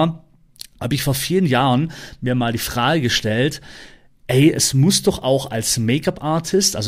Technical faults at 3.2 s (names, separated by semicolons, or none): none